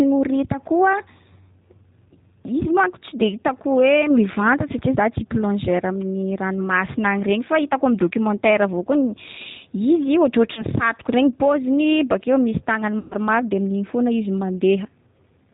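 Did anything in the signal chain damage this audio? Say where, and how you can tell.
Yes. At the codec stage, G.729 coding at about 8 kbit/s runs throughout: nothing above 4 kHz, and a rough, synthetic, pulse-built timbre that a plain low-pass filter wouldn't produce.

At the network stage, VoIP packet loss concealed by the speech codec appears at 10.53–10.64 s and 12.99–13.14 s. Each gap becomes a fading buzzy tone or coloured noise rather than silence, which points to roughly two and six lost 20 ms packets.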